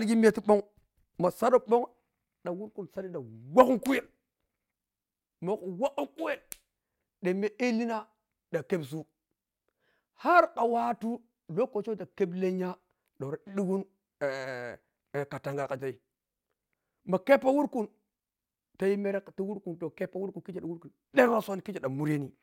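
No technical faults can be heard anywhere in the speech, so there is nothing to describe in time order.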